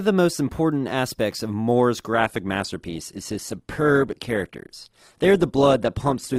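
A speech recording whose top end suddenly thins at 2.13 s and stays that way to the end: the treble above about 12.1 kHz vanishes and the sound takes on a grainy quality, with no gap at the switch. It is an adaptive stream at a lower bitrate. The player dropped to a cheaper encoding, consistent with Opus stepping down from 64 to 16 kbit/s as the connection slowed.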